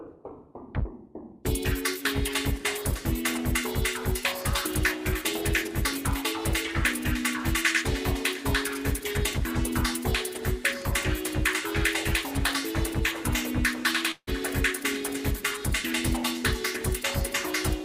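At 14.11 to 14.29 s the audio breaks up in a way that sounds like a long network dropout, likely from a stall in delivery: the last sound is stretched into a fading buzz, about 50 ms of silence follows, and playback resumes with roughly 160 ms of material missing.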